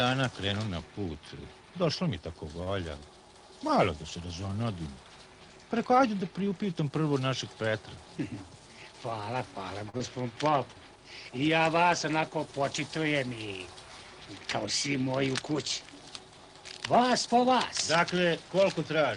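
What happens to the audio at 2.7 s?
At 2.63 to 2.69 s there is a short stall from a late packet. A packet arrived after its playout deadline, so the jitter buffer ran dry and the receiver filled the gap by extending the last sound for about 33 ms. When the packet came in, playback resumed where it had stopped, so no audio is lost, but everything after this point plays 33 ms later. The stretched sound comes across as a brief hold with a faint buzzy or dipped quality.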